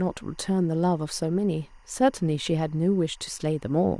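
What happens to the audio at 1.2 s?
At 1.2 s, as across the whole clip, linear timecode from a neighbouring track or cable is leaking into the speech path. Timecode bleed of this kind is a square wave that flips between two pitches, here around 1 kHz and 2 kHz, and its pattern repeats at 23.976 frames per second. Sitting around 35 dB below the speech, it comes through as a faint, steady chirping warble running behind the voice.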